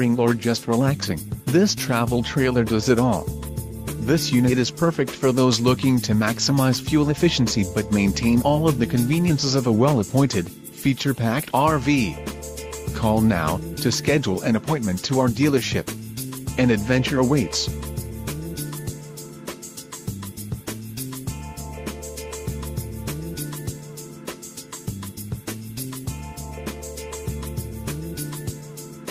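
No technical faults can be heard anywhere in the audio.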